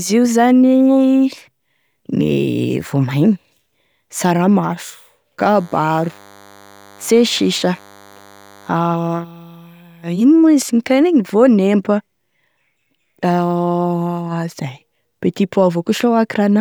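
A speech recording carries DECT cordless phone buzz from 5.41 s to 8.69 s: a thin, steady buzz roughly 30 dB below the speech. A nearby DECT handset or base transmits a brief radio burst every 10 ms, and the audio circuitry rectifies it into a 100 Hz pulse train. A spectrogram shows evenly spaced horizontal lines at 100 Hz and its many harmonics. The waveform shows small regular spikes every 10 ms.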